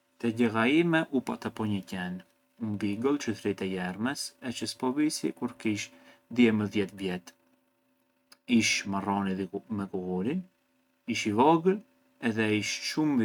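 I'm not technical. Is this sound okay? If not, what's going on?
Yes, nothing wrong turns up anywhere in this speech recording, so there's nothing to fix.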